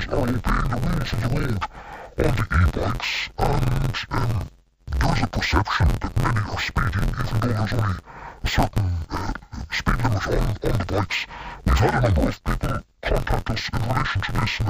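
Throughout the speech, the audio shows interleaved audio read as planar. Each short block of alternating left and right samples has been split in half, with the first half sent to the left channel and the second half to the right. Both halves then play at half speed, so the overall pace is intact but the detail is scrambled. The blocks are about 11.61 ms long, which fits a 512-sample buffer. The result is a dull, robotic quality with a steady buzz at 86.1 Hz and no clear octave drop.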